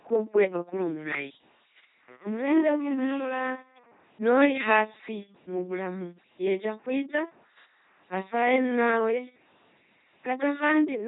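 From start to finish the speech carries the buzzing, mechanical robot quality of an LPC-10 vocoder, and the heavy damage fits a 2.4 kbit/s stream. Each stretch is rebuilt from a short all-pole filter excited by either a pulse train or noise, so voiced sounds buzz and misjudged frames flip abruptly to hiss. On a spectrogram, voiced regions show rigid, evenly spaced harmonics, unvoiced regions show flat noise, and nothing appears above 3.8 kHz.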